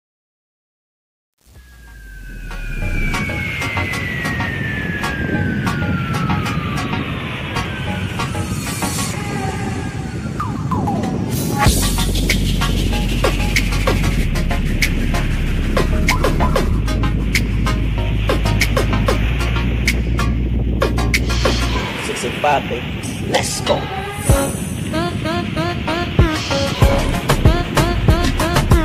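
From 0.0 to 3.09 s the fade-in carries truncation distortion, worst up to about 2.87 s: with no dither and coarse steps, likely an 8-bit stage, the quiet start sounds gritty.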